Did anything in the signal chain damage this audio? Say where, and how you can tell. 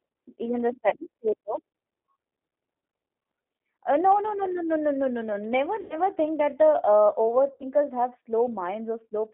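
Yes. At the codec stage, the whole clip carries G.729 coding at 8 kbit/s: speech is confined to roughly 250 Hz to 3.5 kHz and sounds plainly rough and synthetic. A simple band-limit would only dull the sound. This grainy, pulse-built texture comes from rebuilding speech with a model.

At the network stage, VoIP packet loss concealed by the speech codec occurs at 0.89 to 0.96 s, 5.81 to 5.97 s and 7.54 to 7.70 s, covering about 30, 90 and 60 ms of lost audio. Instead of gaps or clicks, the decoder stretches the last sound into a fading buzz or noise, and the speech stays weak briefly afterwards.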